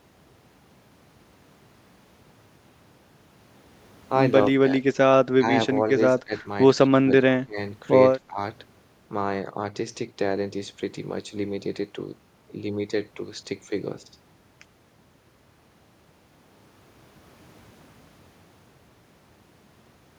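Between 4.57 and 8.39 s the speech dips six times, at 4.57, 5.38, 6.17, 6.91, 7.41 and 8.18 s, by about 15 to 25 dB. This is likely speech suppressed in double talk, with an echo canceller ducking the talker. The waveform shows short notches, and the spectrogram shows thinned bands.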